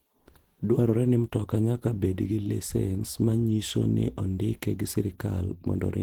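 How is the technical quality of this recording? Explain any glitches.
The recording carries plainly audible Opus compression damage throughout the speech, from start to finish. The sound is hoarse, grainy and muffled in texture, yet the top end is not cut off: content reaches about 20.2 kHz. The likely cause is Opus running in its hybrid mode at a low rate, consistent with about 16 kbps. That mode models the lower band as speech and fills the upper bands coarsely, which roughens the voice.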